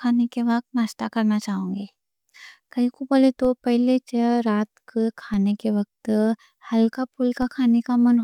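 The waveform's zero line jumps by about -23 dBFS at 3.45 s, 5.34 s and 7.42 s, a DC step each time, then drains away through a 20 Hz high-pass. Each jump lands as a brief low thump beneath the speech, which itself carries on undisturbed.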